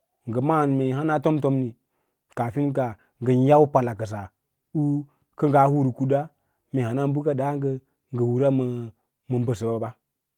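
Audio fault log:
Nothing faulty turns up anywhere in this speech recording. There is no event to log.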